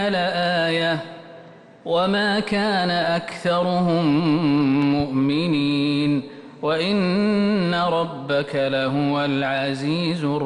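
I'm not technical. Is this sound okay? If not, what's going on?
No. Between 4.82 and 5.02 s there is a loud pop, two sharp clicks close together, laid over the sound, which carries on underneath. It is likely caused by a sudden electrical jolt, such as a plug, switch or static discharge, entering the signal.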